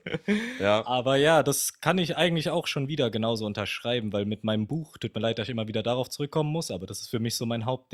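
No technical faults can be heard in the signal.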